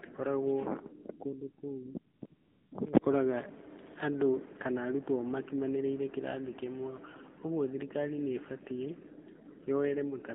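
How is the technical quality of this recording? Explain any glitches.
The recording has passed through a mobile phone link, and two faults are present.

Throughout, the sound carries the signature of the AMR narrowband mobile codec. Everything sits between roughly 200 Hz and 3.7 kHz, and the voice has a buzzy, synthetic edge. The codec rebuilds speech from a vocal-tract model excited by a handful of pulses, and the plainly audible coarseness points to a low rate of around 7.4 kbps. A simple low-pass filter would dull the top end without adding this artificial, rasping texture.

From 2.16 to 2.22 s, 2.26 to 2.32 s and 2.34 to 2.72 s, AMR comfort noise takes over. During these stretches the phone treated the talker as silent, stopped sending speech frames, and the receiver filled the gaps with generated noise shaped from a rough level and spectrum estimate. The real background gives way to a smooth, even hiss that switches in and out. 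This differs from a dropout because the gaps are filled with steady noise rather than going dead, and it differs from noise gating because the fill sounds synthetic instead of simply muted.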